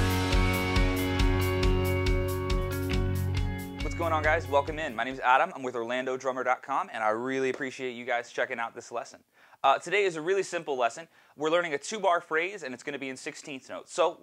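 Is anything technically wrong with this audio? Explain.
No, nothing is technically wrong with this audio.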